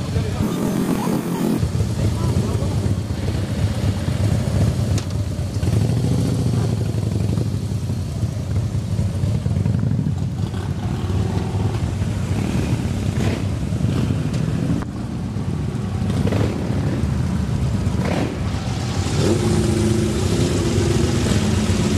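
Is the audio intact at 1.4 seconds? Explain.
No. At 1.4 s the audio sits inside a stretch of planar audio read as interleaved, running from 0.42 to 1.61 s. Each 46 ms block stores all left samples, then all right samples. Here it is read as alternating pairs. So each block plays twice at double speed, left half then right half. The blocks are long, which fits a 2048-sample block. The sound therefore jumps a full octave high, with a flutter at about 21.5 Hz.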